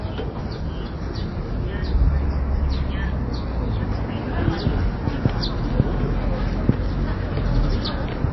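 MP3 compression damage runs through the whole clip and is plainly audible, likely from encoding at a very low bitrate, around 23 kbps. Starved of bits, the encoder discarded everything above 5.8 kHz, so the sound is dull and capped. It also spent its remaining bits only where its hearing model judged them essential, dropping weak frequency components that flicker in and out from frame to frame. That produces a watery, swirling texture and smeared attacks.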